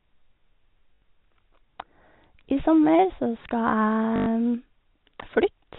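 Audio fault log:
0.94–1.02 s and 4.16–4.26 s: packet loss with last packet repeated. Each gap sounds like a short robotic stutter with a buzz near 50 Hz. The receiver kept replaying the last chunk it had, filling 80 ms and then 100 ms. The buzz rate fits 20 ms packets.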